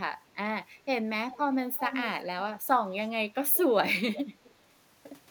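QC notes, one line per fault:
1.30–1.38 s, 1.73–2.05 s, 2.22–2.27 s, 4.13–4.22 s, 4.44–4.52 s: echo leak. Short delayed copies of the speech trail the original by about 390 ms, appearing as brief scraps. The 1.73–2.05 s stretch is strongest, only a few dB under the direct speech. The others sit well below it, with the one at 4.44 s barely audible. The likely cause is a far-end loudspeaker whose echo canceller let part of the microphone pickup return down the line.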